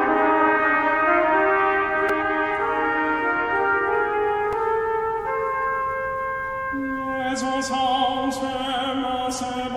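A repeated buffer appears at 2.09 s and again at 4.53 s in this music. Fresh audio failed to reach the output in time, so the device replayed its last tiny block: four extra times at 2.09 s, twice at 4.53 s. Each block lasts about 1.45 ms, which fits a 64-sample buffer. The repeats are too short to hear as a stutter and come across as a brief click or buzz, with a few milliseconds of music dropped each time.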